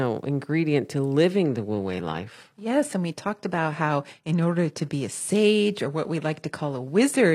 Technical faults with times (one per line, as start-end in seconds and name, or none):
1.31-7.34 adaptive stream at a lower bitrate